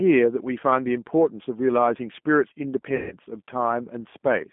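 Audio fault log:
Throughout, G.729 codec: speech is squeezed into a 200 Hz to 3.5 kHz band and sounds plainly rough and synthetic, rebuilt at 8 kbit/s from a filter and a few pulses.
2.96 to 3.15 s, VoIP packet loss concealed by the speech codec: about 150 ms went missing, so the decoder stretched its last frame into a fading buzzy tone or coloured noise, staying weak until it recovered.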